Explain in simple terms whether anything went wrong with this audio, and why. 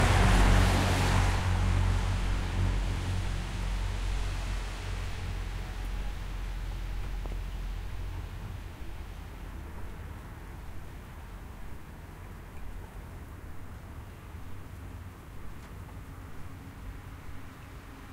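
A loud pop hits at around 7.26 to 7.34 s: two sharp clicks in quick succession, a bit louder than the surrounding sound, which keeps going underneath. That's likely a quick electrical jolt, like a plug, switch or static discharge, getting into the signal.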